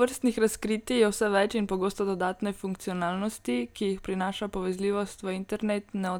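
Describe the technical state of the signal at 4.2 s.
At 4.2 s the speech signal is intact, with no dropout, distortion or other fault audible at that moment.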